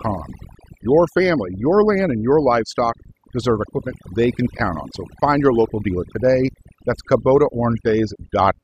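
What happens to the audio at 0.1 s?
At 0.1 s the background has fallen to near silence dotted with twinkling specks. This is overdone noise removal, present throughout the clip: an overly aggressive reduction stage shuts down individual frequency bands near its noise estimate, taking quiet speech detail with them.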